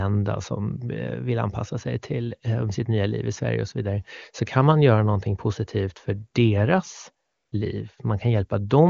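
From 7.25 to 7.51 s, just after "någonting positivt för deras", AMR comfort noise takes over: the phone stopped sending speech frames, so 0.26 s of smooth synthetic hiss replaces the real background, showing as a flat, featureless band on the spectrogram.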